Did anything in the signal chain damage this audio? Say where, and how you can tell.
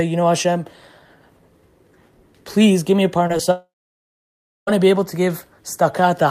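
Yes. The network leg of the call is where this speech got hurt. There's short concealed packet loss at 3.27 s and again at 3.37 s. Each one is a quick smear lasting about 20 ms where real audio went missing and the receiver stretched the last bit of sound to fill the gap before blending back in. You hear a brief wobble rather than a clean cut.

Right after that comes a long network dropout, running from 3.51 s to 4.69 s. The last sound carries on as a fading buzz for a moment, and then about 1.0 s of near-silence follows before the speech comes back. Whatever was said in that stretch of about 1.2 s is simply gone. That's likely a burst of lost packets: the concealment ran out of anything to extend and gave up.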